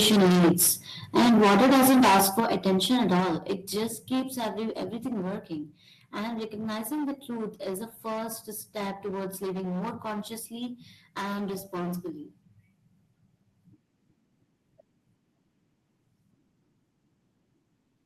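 Hard clipping runs through the whole clip. The speech is driven about 15 dB past what the signal path can carry, so roughly a tenth of all samples are sliced off at the ceiling. Every louder stretch picks up a harsh, fizzy edge, with crackle on the stressed syllables. On the waveform the peaks sit in flat plateaus. On a spectrogram, smeared energy climbs well above the natural harmonics each time the level rises.

From 1.16 to 2.4 s the distortion gets much worse, sitting about 6 dB beyond the limit, with around half the samples flattened. This is likely microphone overload: input gain set too high, so the converter runs out of range before anything else touches the signal. The syllables turn gritty and broken. The waveform here becomes a dense run of squared-off tops, and the spectrogram fills with dense broadband haze.

Right after that, at 2.4 s, the microphone volume is stepped down by about 9 dB. 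At 3.2 s it drops again by about 5 dB. Both cuts are likely automatic gain reductions made by the call software in response to the overload. The speech and the room sound behind it fall together, abruptly, at each point. The waveform envelope steps down sharply at both times, and the spectrogram dims across all frequencies at once.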